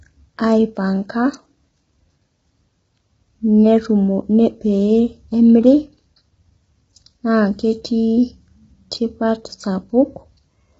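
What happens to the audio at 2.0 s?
At 2.0 s the speech sounds rough and grainy, with a hissy fill between the harmonics. This is heavy low-delay AAC compression running through the whole clip, likely AAC-ELD at a rate near 16 kbps. Its short frames resolve pitch poorly, so harmonic detail smears into noise. On a spectrogram the harmonic stripes look blurred and speckled, the gaps between them filled with noise, and all energy stops at a flat ceiling near 7.8 kHz.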